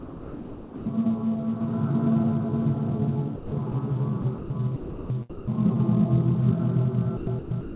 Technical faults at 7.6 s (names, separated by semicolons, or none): sound chopped by the voice detector